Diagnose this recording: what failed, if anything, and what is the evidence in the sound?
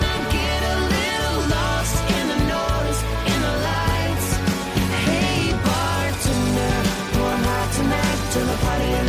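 Nothing failed: no stage in the chain, from wiring and conversion through processing, transmission, storage and playback, leaves an audible mark on this recording.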